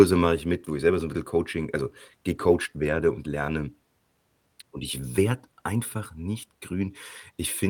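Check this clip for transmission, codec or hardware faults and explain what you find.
One transmission fault stands out: a lost packet rebuilt from error correction, from 2.35 to 2.53 s in this speech. Several separate packets went missing, and the decoder filled the hole with the low-bitrate backup copies carried inside the packets that followed. About 100 ms of audio was rebuilt this way, which points to five lost packets of 20 ms each. There is no dropout, but that stretch sounds coarser and noisier than the speech around it.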